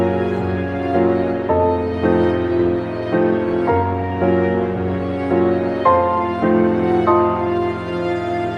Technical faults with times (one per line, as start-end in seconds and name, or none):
none